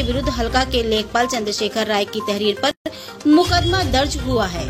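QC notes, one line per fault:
2.71–2.86 s, gap at a join of encoded pieces: two separately encoded sections were joined without trimming, so the encoder's start-up delay and the padded final frame of the earlier piece both stayed in the stream. The result is a 145 ms hole of silence cut into otherwise continuous sound. The codec smears the edges of the drop-out and the return, so the fully silent part is somewhat shorter. The sound then resumes exactly where it left off, with nothing lost.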